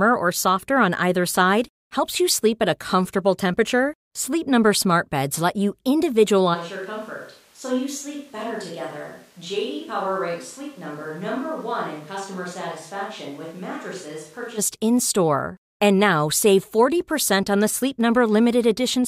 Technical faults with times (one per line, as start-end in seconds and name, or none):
6.56-14.57 switch to a distant microphone